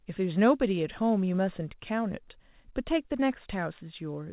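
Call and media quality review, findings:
No findings in this call and media quality review; the speech arrives through the call path with nothing above 4 kHz, which fits a narrowband G.711 mu-law link at 64 kbps.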